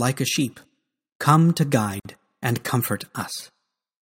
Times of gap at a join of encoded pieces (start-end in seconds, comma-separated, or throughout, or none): 2.00-2.05